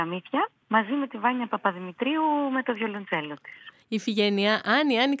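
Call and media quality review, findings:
No faults found on review.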